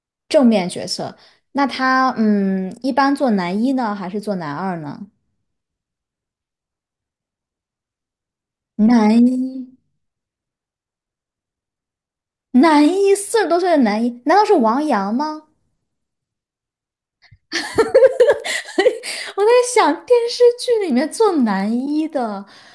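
From 18.2 s to the end, a steady ticking at 10 per second rides on the speech. It comes from the resampler restarting on every block: each 100 ms block was converted from 48 kHz to 24 kHz separately, leaving a small error at every block edge.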